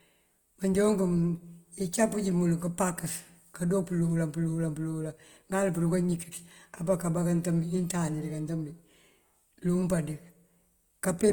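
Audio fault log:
Throughout, low-bitrate audio saved at a high bitrate: artefacts fitting 24 kbit/s Opus persist, likely through a 320 kbit/s MP3 re-encode that restores nothing.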